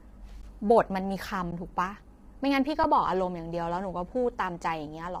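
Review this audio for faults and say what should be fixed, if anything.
The speech throughout sounds rough and grainy, with noise filling the gaps between harmonics and a thin, somewhat synthetic top band. The cause is likely heavy low-delay AAC compression (AAC-ELD), at a rate that fits about 24 kbps. Its short frames resolve pitch harmonics poorly, so the damage is a steady harmonic smearing rather than the pre-echo or swirling of a longer-frame codec. To prevent it, send speech at a higher bitrate or use a longer-frame codec when latency allows.

Underruns with a held sample occur at 0.42 s (about 14 ms), 1.51 s (11.6 ms, which fits a 512-sample buffer) and 2.84 s (5.8 ms, which fits a 256-sample buffer). Each time, the output ran dry and the converter froze on its last value, so the waveform goes flat and the sound briefly stalls. Playback then resumes where it stopped, with no jump. 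Unlike a dropout to silence or a packet-loss gap, there is no hard click and nothing is skipped. To prevent them, enlarge the output buffer or give the audio thread higher scheduling priority.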